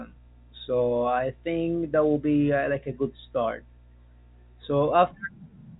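Nothing goes wrong anywhere in this speech, which simply carries the narrow telephone sound of G.711 coding, with nothing above about 3.8 kHz.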